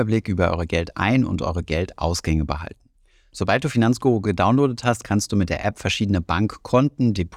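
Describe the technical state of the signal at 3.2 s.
At 3.2 s the speech signal is intact, with no audible fault at that moment.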